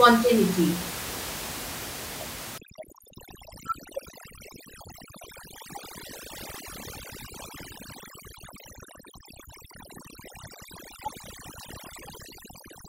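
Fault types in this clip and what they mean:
Overdone noise removal: from 2.58 s onward, a noise reducer set too strong mutes bands near its noise estimate, so the room noise drops and breaks up into twinkling specks; a spectrogram shows scattered dots and ragged harmonics.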